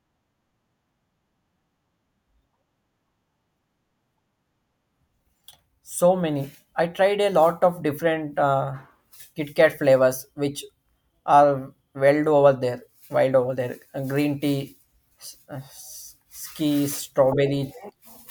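Nothing in this recording trips the ear as a fault; no dropout, glitch or distortion turns up anywhere along the way.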